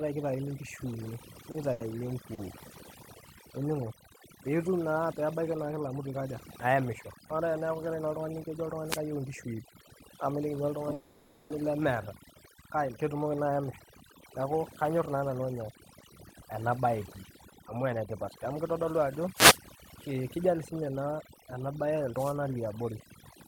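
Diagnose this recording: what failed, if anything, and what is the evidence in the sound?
Overdone noise removal runs throughout the speech. This is a call-processing fault: the suppressor is set so strong that the background collapses into twinkling specks.

Short stalls from late packets occur at 1.51–1.57 s, 1.72–1.83 s and 2.34–2.41 s. This is a network fault: the jitter buffer ran dry, so the last sound was held for 30, 80 and 40 ms.

Wireless microphone noise hits occur at 8.83–9.03 s and 19.34–19.60 s. These are analogue radio-link fades that let receiver noise surge through as brief swishes of static.

The call audio freeze at 10.93–11.53 s is a 570 ms fading buzz before "lemeeta kake ketumoki naa" resumes unbroken. Its likely cause is delayed packets draining the jitter buffer.

Jitter buffer speed-up runs at 14.84–19.19 s (110% speed) and 19.78–21.93 s (108% speed). The receiver trimmed pitch periods, about 0.4 s and 0.15 s in total, to cut delay, which makes the speech sound hurried at unchanged pitch.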